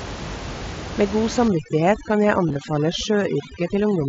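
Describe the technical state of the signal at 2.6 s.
At 2.6 s the signal is under overdone noise removal, running from 1.48 s to the clip's end; over-strong gating leaves a lowered background with sparkling specks, seen as black gaps and isolated spectrogram dots. Concealed Bluetooth headset packet loss ended just before, spanning 2.48 to 2.56 s: about 45 ms lost in runs of at most 15 ms, patched with repeated waveform, showing as brief periodic stretches and faint warbles.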